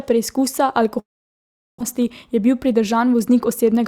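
Speech, with two linked faults. From 0.99 to 1.82 s the sound stops arriving: the last sound is stretched into a brief fading buzz or hiss, then near silence for most of the gap, and when the speech resumes about 620 ms of it is simply gone. This is likely a long network dropout. Unlike a short packet loss, which leaves only a tiny smeared glitch, here the concealment gives up and the listener hears a real hole with content skipped. The dropout leaves the receiver holding roughly 150 ms more delay than it wants, so from 1.93 to 3.81 s a jitter buffer speed-up trims it back, cutting small pitch-period slices repeatedly so the speech runs about 7% fast, roughly 150 ms shorter in total. The pitch stays where it was, which separates it from a resampling or clock error that would raise the voice along with the tempo. What you hear is a hurried delivery rather than a chipmunk effect.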